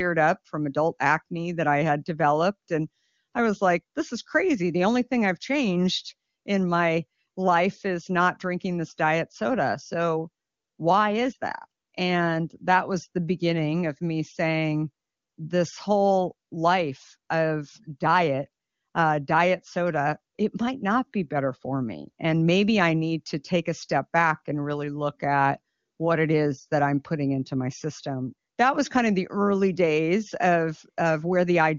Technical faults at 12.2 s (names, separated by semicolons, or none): none